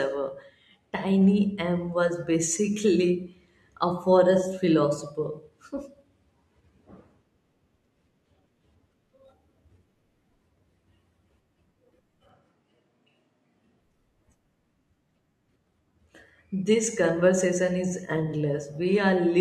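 A speech clip in which, from 12.29 to 13.81 s, the sound abruptly turns roomy and hollow with thinner bass, then snaps back: likely a switch to a distant microphone. A spectrogram shows lost low end and reverb smear between hard edges; waveform level barely changes.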